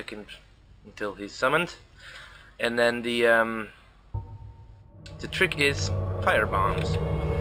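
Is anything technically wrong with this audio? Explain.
Yes. Imaging from linear upsampling runs through the whole clip. The audio was raised to a higher rate by joining neighbouring samples with straight lines, a crude interpolation filter that does little to suppress mirrored copies of the spectrum. The pattern fits a 12 kHz source brought up to 48 kHz. The top of the original band, below 6 kHz, sounds dulled, and a first image band appears from 6 kHz to 12 kHz, roughly 25 dB below the signal. It is heard as a metallic shimmer on high-frequency content.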